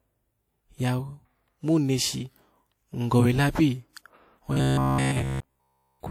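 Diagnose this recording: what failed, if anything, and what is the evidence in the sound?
A short hiss smears the attack from 3.93 to 3.96 s, just after "hin gowe labi": pre-echo at the codec stage, block quantisation noise spreading about 35 ms ahead.

From 4.53 s to the end, the speech becomes a rigid metallic buzz near 66.7 Hz, likely robotic sound from repeated short buffers, with roughly 15 ms blocks replayed throughout.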